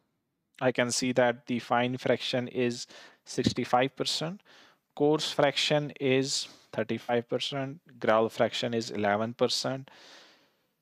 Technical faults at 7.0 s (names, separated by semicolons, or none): AAC frame loss with concealment